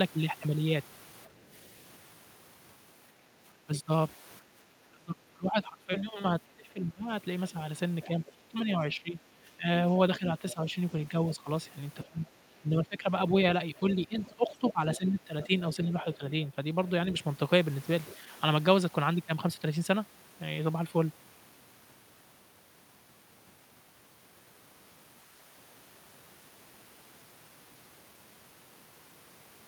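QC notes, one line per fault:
1.29 to 1.49 s, background gated by the echo canceller: the room tone behind the talker dips by about 6 dB for roughly a fifth of a second, then comes straight back. The canceller clamped the mic down while its loudspeaker was playing, so the ambience briefly sags, and it recovers as soon as the canceller releases.
1.51 to 1.56 s, 7.49 to 8.59 s, 10.5 to 11.36 s and 13.77 to 18.15 s, other side's voice leaking through: a second voice creeps in underneath, barely there at first (roughly 40 dB below the talker), then climbing to around 25 and 20 dB down, and ending up only about 15 dB under in the long final stretch. Likely the far end playing on the talker's loudspeaker and not fully cancelled out of the mic, and it gets louder as the clip goes on.
3.66 to 7.1 s and 8.07 to 16.22 s, speech suppressed in double talk: the talker's own voice gets ducked in pieces while the other side is talking too. 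The first run is harsh, with drops of around 30 dB adding up to about two seconds. The second is milder, about 15 dB down, spread across roughly three seconds and overlapping the leak. Likely the canceller couldn't tell its talker from the echo and pulled both down.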